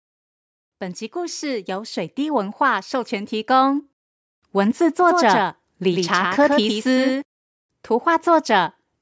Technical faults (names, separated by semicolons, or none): automatic gain rising; doubled audio track